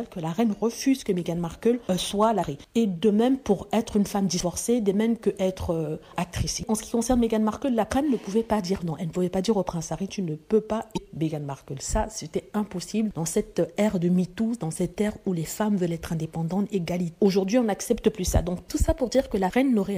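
At 2.39–2.44 s and 10.94–10.98 s, damaged data in the compressed stream makes the decoder lose sync. Each produces a brief glitch.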